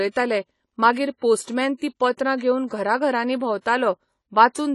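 Throughout the speech, nothing reaches above 11.5 kHz. The codec damage is plainly audible: a dull, smeared top and a fizzy, warbling texture on sibilants. This is AAC compression, likely AAC-LC at a low bitrate around 32 kbps. Unlike a plain low-pass filter, the remaining band itself churns.

From 1.77 to 1.82 s a short hiss leads into a sharp onset. Just after "घरां घरांनी", from 3.62 to 3.66 s, it happens again. This pre-echo comes from block-wide quantisation noise filling the quiet before each attack. Unlike reverb, the smear precedes the sound.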